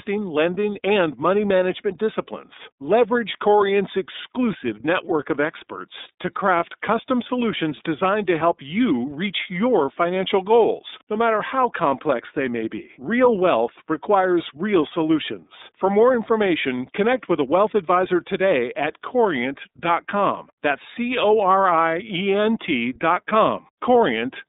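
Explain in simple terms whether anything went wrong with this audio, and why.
Yes. The whole recording passed through the iLBC codec, a phone-call compressor that rebuilds speech in small independent chunks, which fits 30 ms frames. Everything above about 3.8 kHz is gone, so the speech sounds muffled, slightly rough and synthetic from start to finish.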